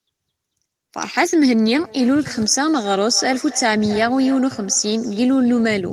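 From 1.76 s to 5.88 s the speech carries a feedback echo between two devices: a second device in the same room replays the call, the first microphone picks that playback up, and the local echo canceller can't remove sound it didn't play itself. Each word returns after roughly a third of a second, peaking about 18 dB below the speech and thinner, more ringing than the original. The fixed, distinct delay separates it from room reverberation.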